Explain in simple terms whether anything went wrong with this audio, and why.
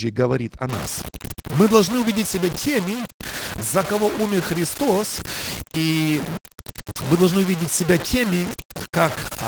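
Opus voice compression was applied to the whole recording, squeezed hard enough to save space that the damage is plainly audible. The speech comes out slightly muffled, hoarse and a little robotic, because the codec keeps only a rough outline of the sound.

Low bit depth without dither starts at 0.69 s and runs to the end. The audio was most likely cut down to very few levels, roughly five bits' worth, by simply chopping off detail. This adds a gritty, grainy roughness not far below the speech in level, shifting as it changes.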